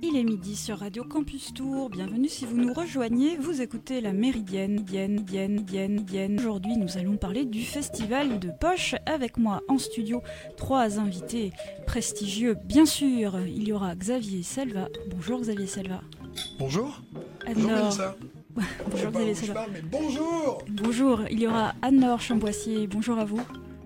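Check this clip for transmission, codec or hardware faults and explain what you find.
One fault is present: a broken-record loop from 4.78 to 6.38 s. A 0.4 s fragment repeats four times back to back, likely because a stalled player or stream kept resending its last held piece, so the audio meant for that span is lost. The waveform shows one identical shape copied in sequence, and a spectrogram shows the same pattern tiled every 0.4 s.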